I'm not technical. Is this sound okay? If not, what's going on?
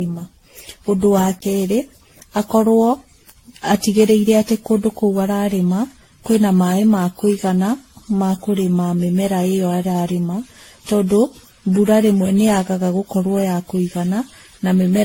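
No. The recording was most likely saved in a compressed format, reopened and saved again about fifteen times over. Each save throws away a little more detail in a slightly different place, so the damage piles up. This is called generation loss. From start to finish the speech sounds swirly, hollow and smeared, the starts of sounds are blurred rather than crisp, and nothing above 16.6 kHz remains, so the very top of the sound is gone.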